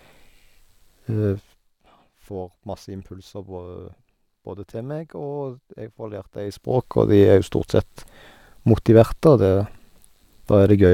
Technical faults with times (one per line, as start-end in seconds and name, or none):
none